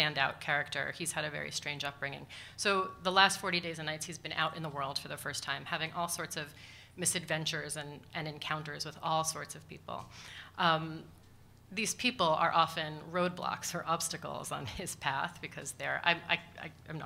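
Nothing here trips the ear at any point, so there's no technical fault to report in this clip.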